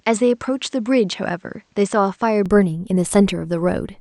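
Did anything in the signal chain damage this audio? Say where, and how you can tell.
Yes. From the start to 2.46 s the audio is band-limited, with nothing above 8.6 kHz and a faint noise floor roughly 45 dB down, then it opens up with no gap or level jump. This points to the input stage, likely an input switched to a poorer device.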